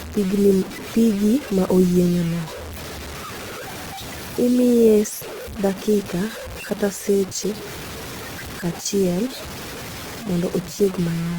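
Speech, with grainy distortion running through the whole clip, likely low bit depth without dither. The grit follows the voice, strongest on quiet syllables and decays, while the softest passages drop out or sputter between two levels. The error sits roughly 15 dB below the signal, which fits a 5-bit quantiser with truncation. A zoomed waveform shows coarse staircase steps, and a spectrogram shows broadband hash that appears only with the speech and leaves the pauses blank.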